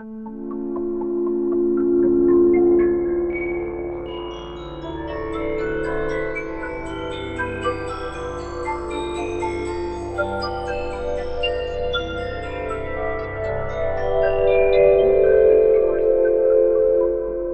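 No dropouts, distortion, level jumps or timing errors can be heard anywhere in the audio.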